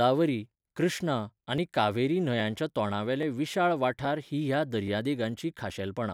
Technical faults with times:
0.76-5.70 clock drift buffer slips

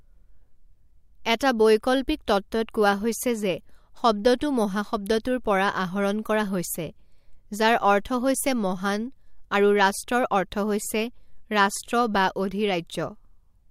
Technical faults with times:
1.39 pre-echo
5.23 pre-echo

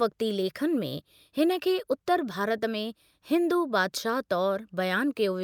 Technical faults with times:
none

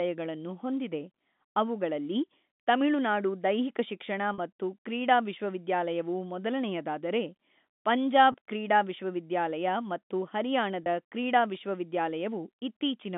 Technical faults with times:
4.34-4.38 packet loss with pitch repetition
8.32-8.34 packet loss with pitch repetition
10.84 packet loss with pitch repetition

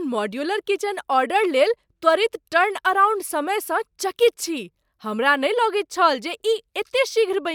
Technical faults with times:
none

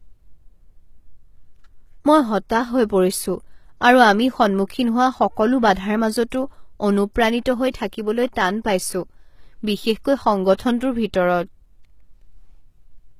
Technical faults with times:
0.00-13.19 HE-AAC compression
6.30 pre-echo
10.54-10.59 pre-echo

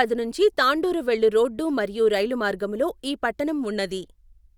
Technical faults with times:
none

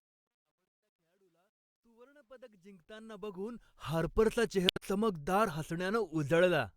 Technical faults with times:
0.00-4.14 truncation distortion on a fade
0.67-0.77 damaged data in a compressed stream
4.66-4.82 damaged data in a compressed stream

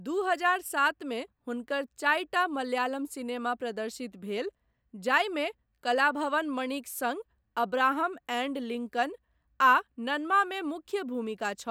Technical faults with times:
none

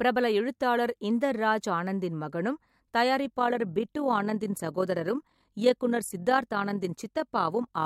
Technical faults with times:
3.25-7.86 overlap-add ripple

